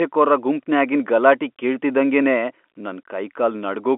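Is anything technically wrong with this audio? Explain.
No, nothing is wrong: the speech sits on an ordinary G.711 telephone coding path, which fits a 64 kbps mu-law line, with the expected band of roughly 250 Hz to 3.4 kHz and nothing above 4 kHz.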